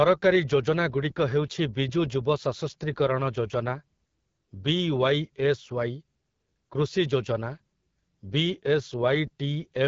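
Throughout, the speech sounds rough and raspy with nothing above 7.5 kHz, plainly audible AMR wideband (HD Voice) codec damage that points to a low rate near 8.85 kbit/s.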